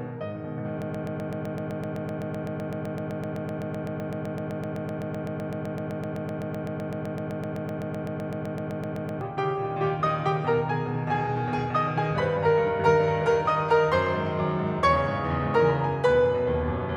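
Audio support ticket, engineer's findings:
Broken-record loop, 0.82 to 9.21 s. Music stalls into a 127 ms fragment repeating exactly, back to back, about 66 times. Likely cause: player, encoder or stream stalled and kept resending its last buffered piece. Audio due in that span is lost.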